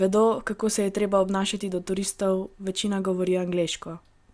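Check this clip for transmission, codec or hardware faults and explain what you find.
No transmission, codec or hardware faults are audible anywhere in this speech recording.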